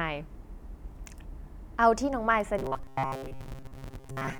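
From 2.59 s to 4.40 s the speech collapses into a rigid, metallic buzz pitched at 134 Hz, still loosely tracking the words. This is robotic sound from repeated short buffers, likely caused by audio arriving too slowly, so a roughly 7.5 ms slice is replayed over and over for most of that stretch.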